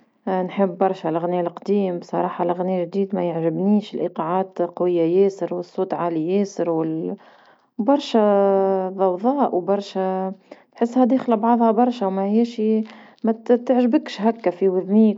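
Nothing in this recording stands out as a technical fault, so there's no moment worth flagging along the way.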